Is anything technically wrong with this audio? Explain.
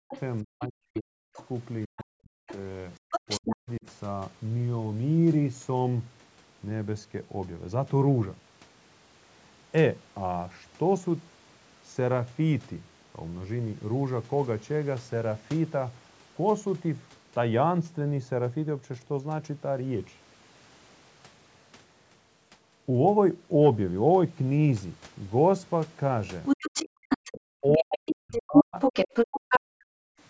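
Yes. Speech suppressed in double talk, from 0.00 to 3.85 s and again from 27.32 to 30.07 s: with both sides talking at once, the echo canceller likely mistook the talker for loudspeaker echo and turned everything down, so the voice dips by roughly 40 dB or cuts out in pieces, for about two seconds in the first stretch and one and a half in the second.

The other side's voice leaking through, from 0.11 to 1.46 s, 2.47 to 3.56 s and 26.45 to 29.60 s: the far end's loudspeaker playback likely reached the microphone and was not fully cancelled. A second voice is heard, faint at first, then close to the talker's level, and finally as loud as the talker.

Background gated by the echo canceller, from 26.89 to 27.04 s: while the loudspeaker played, the canceller clamped the microphone, and the room sound drops by about 40 dB for roughly 150 ms before returning. Call microphone processing also leaves nothing above 8 kHz.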